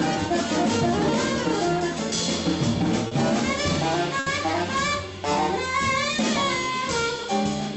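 Audio over a WebRTC call path, band-limited around 8 kHz, has two short stalls from late packets, at 3.07 to 3.14 s and 4.19 to 4.29 s. The jitter buffer ran dry, so the last sound gets held about 40 ms, then 70 ms, before carrying on, with nothing skipped.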